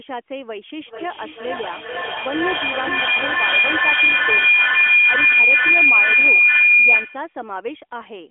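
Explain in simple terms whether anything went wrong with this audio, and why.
Feedback howl runs from 0.87 to 7.42 s. Two devices on the same call pick each other up, so the sound circles between loudspeaker and microphone and grows with each pass. It becomes a whistle around 2 kHz, pulsing roughly every 0.4 seconds, that ends up louder than the speech.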